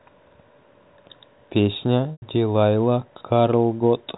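At 2.12 s the speech breaks for about 100 ms, until 2.22 s, from packet loss with pitch repetition. The receiver bridged the gap by repeating the last pitch period, so the sound holds briefly as a flat, buzzy tone, fades out over roughly 50 ms into silence, then returns with a short cross-fade. The gap length fits five lost 20 ms packets. The G.711 telephone coding limits the band to below 4 kHz.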